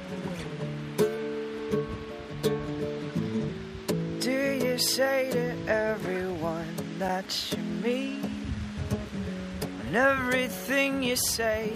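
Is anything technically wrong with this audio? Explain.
Yes, there is a block of digital silence at 7.09 s. For about 5.8 ms the signal drops straight to silence and then resumes, with no fade on either side. A gap that short and that exact fits a 256-sample output buffer that was not filled in time and went out as zeros. At this length the abrupt break into and out of silence is heard as a tick or dip.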